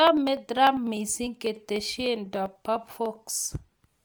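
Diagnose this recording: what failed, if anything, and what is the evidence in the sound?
Codec stage: the speech carries a grainy, breathy edge throughout, with content reaching about 20.2 kHz, so this is not a simple band limit. That points to likely Bluetooth LC3 compression, consistent with 10 ms frames near 48 kbps.

Driver or buffer stage: periodic USB or driver dropouts produce regular ticks from 0.07 to 3.95 s, about every 0.1 s, roughly forty in all. Each skips about half a millisecond, and the even spacing rules out random network loss.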